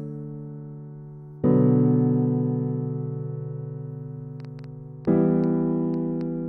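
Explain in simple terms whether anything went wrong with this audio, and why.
Something did go wrong near the end. From 4.40 s to 6.22 s there is a train of clicks: about seven sharp ticks, arriving at an uneven pace of roughly four per second and about as loud as the sound itself. The likely cause is interference from nearby equipment or a faulty connection or power supply. Unlike a single pop, these clicks repeat with much the same shape, and unlike dense crackle they are few and clearly separate.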